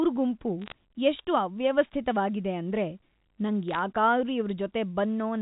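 Speech heard over a G.711 A-law telephone channel, which limits it to 4 kHz, carries two short bursts of bit errors on a digital phone line, at 0.62–0.72 s, just before "ಎಷ್ಟ್ ಅವ್ಯವಸ್ಥಿತ್ವಾಗಿದೆ ಅಂದ್ರೆ", and at 3.68–3.79 s. At an error rate of a few tenths of a percent, flipped sign or high-order bits throw single samples far off, producing sharp crackling ticks. These appear as isolated spikes on the waveform and thin vertical lines spanning the whole band on a spectrogram.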